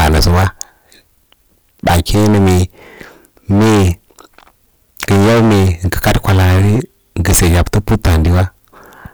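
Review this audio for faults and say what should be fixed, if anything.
Hard clipping runs throughout the clip, from start to finish. The speech was driven about 22 dB past what the recording chain could pass, so every loud moment hits the ceiling and its peaks are sheared flat. With nearly a third of the waveform sitting at that limit, the flattened tops add dense high harmonics, heard as a harsh fuzz on every loud sound rather than occasional crackle. To prevent it, set input gain so peaks stay well below full scale, with several decibels of headroom.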